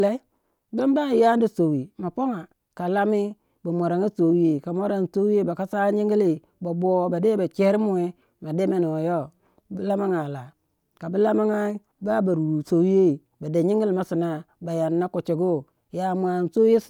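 No technical faults can be heard at any point in the speech.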